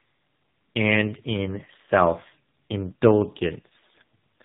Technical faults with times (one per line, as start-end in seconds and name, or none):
0.00-4.45 tandem speech coding